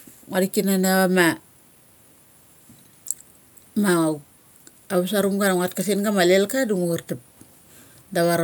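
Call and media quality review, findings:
No findings in this call and media quality review.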